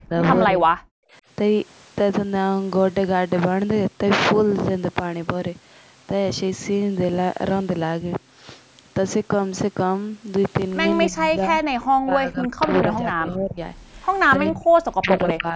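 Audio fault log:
0.0–0.14 s, 0.47–0.7 s, 11.07–13.59 s, 14.37–14.67 s and 15.01–15.56 s, speech suppressed in double talk: the speech sinks or breaks into fragments, by up to about 40 dB early on and about 20–30 dB later. This is likely the echo canceller turning the talker down along with the far-side echo while both sides spoke at once.
0.98–1.13 s, background gated by the echo canceller: the room sound drops out abruptly by about 40 dB for roughly 150 ms, then returns. The canceller clamped the microphone hard while the loudspeaker was playing and then let go.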